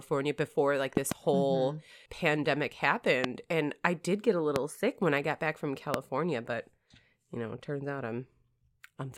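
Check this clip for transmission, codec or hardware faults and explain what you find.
The speech carries a recurring loud pop fault. A double pop occurs at 0.97–1.14 s, with single pops at 3.24–3.27, 4.56–4.58 and 5.94–5.96 s, each roughly 20 dB above the speech. These are likely voltage spikes from a connector, switch or driver glitch, heard as sharp clicks over continuing speech.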